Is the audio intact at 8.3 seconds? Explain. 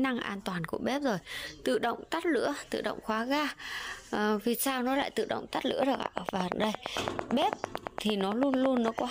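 No. At 8.3 s the sound sits inside a train of clicks running from 5.83 to 9.00 s: around thirty evenly spaced, near-identical pulses at 8.86 per second, peaking roughly 20 dB above the signal, likely from electrical interference or a faulty connection, heard as steady ticking.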